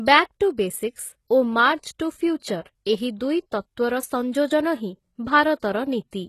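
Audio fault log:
throughout, HE-AAC compression: the speech is plainly damaged, with nothing above 12.3 kHz and a treble that sounds gritty and lispy on s sounds. The band is rebuilt from copied lower bands rather than simply lost, which sets it apart from plain low-pass dulling. The likely cause is a very low bitrate, around 16 kbps.
2.61–2.66 s, 4.32 s and 5.60–5.63 s, pre-echo: a short hiss comes just before each sharp onset, spreading about 43 ms, 16 ms and 28 ms, and each attack sounds softened. The noise sits ahead of the attack, not after it, which distinguishes it from reverb or a decaying tail.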